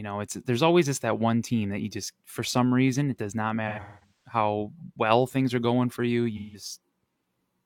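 AAC frame loss with concealment from 3.68 to 4.34 s and 6.36 to 6.65 s: the decoder rebuilds missing frames from earlier spectra, giving smeared, phasey patches that show as blurred, repeated spectral texture.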